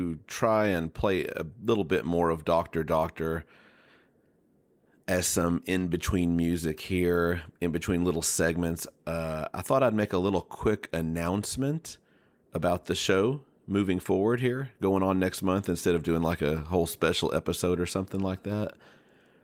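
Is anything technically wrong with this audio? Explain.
No, nothing technically wrong stood out on listening to this speech recording.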